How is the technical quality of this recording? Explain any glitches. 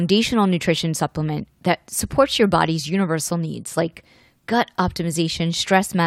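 The recording has no technical glitches. Nothing in the speech needs explaining.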